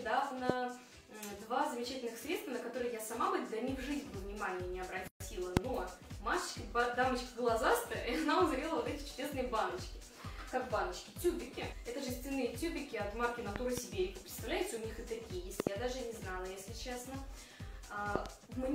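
Loud pop at 0.50 s: a single sharp pulse, roughly 25 dB above the sound, likely a voltage step from a plug, switch, static or driver glitch, while the sound continues underneath.

Gap at a join of encoded pieces from 5.08 to 5.20 s: separately encoded pieces were joined untrimmed, leaving encoder delay and padding as a 128 ms gap with smeared edges, before the sound resumes where it stopped.

Loud pop at 5.57 s: another single pulse of similar strength, about 25 dB above the sound, carrying the same likely electrical cause.

Loud pops from 13.56 to 13.80 s, 15.60 to 15.69 s and 18.16 to 18.28 s: each is a pair of quick pops, roughly 20 to 25 dB above the sound, from the same likely voltage-step cause.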